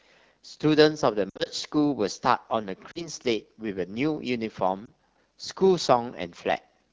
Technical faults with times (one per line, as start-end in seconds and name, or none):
0.00-6.93 AMR wideband (HD Voice) codec
1.29-1.50 lost AMR speech frames
2.91-3.08 lost AMR speech frames
4.85-4.91 lost AMR speech frames